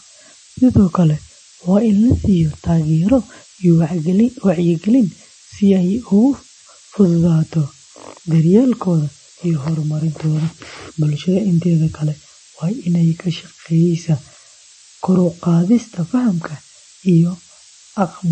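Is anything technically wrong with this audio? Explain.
Yes, two faults run through the whole speech recording.

Switching supply whistle, present throughout: a switching power supply running in an audible burst mode, or beating against another supply, puts a thin high tone on the signal. Here it is a whistle wandering between 13.55 and 13.72 kHz, sitting about 10 dB below the speech. It stays audible through pauses and shifts slightly in pitch as the supply's load changes.

The second fault, also constant, is bandwidth loss with audible coding damage. Nothing remains above 8.3 kHz, so sibilants sound dull and clipped. Around the speech there is a watery, swirling texture, and consonant onsets smear instead of landing crisply. The likely cause is MP3 compression at a low bitrate of roughly 31 kbps. Short of bits, the encoder cuts the treble at a fixed point and drops weak frequency components, which flicker on and off from frame to frame.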